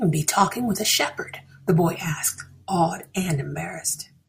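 No technical faults can be heard anywhere in the speech recording.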